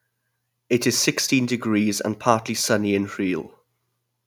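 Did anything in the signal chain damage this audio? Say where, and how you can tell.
No, nothing along the chain has left a mark I can hear on this bit of speech, so there's nothing to trace back to any stage.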